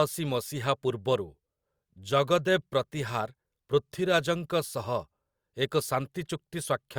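No audible technical faults present.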